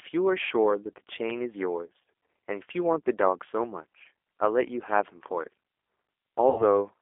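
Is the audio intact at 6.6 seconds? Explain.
No. From 6.49 to 6.63 s there's VoIP packet loss concealed by the speech codec. About 90 ms went missing, which points to three lost packets, and the decoder kept stretching its last pitch and filter into a buzzy tone or coloured noise that fades out. Underneath that, the whole clip runs through the G.729 codec at 8 kbit/s, squeezed into a 300 Hz to 3.5 kHz band, with a plainly audible rough, synthetic edge.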